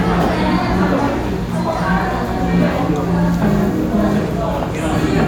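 Everyday sounds, with no technical faults to report.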